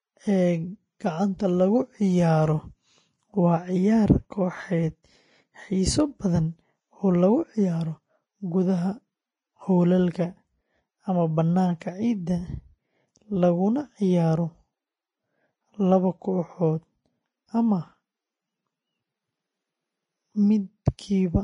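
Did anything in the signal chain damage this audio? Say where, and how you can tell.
Yes, at the codec stage: likely Vorbis compression at a bitrate around 25 kbps. Throughout, nothing remains above 10.6 kHz, and coarsely quantised treble turns the speech hissy and grainy.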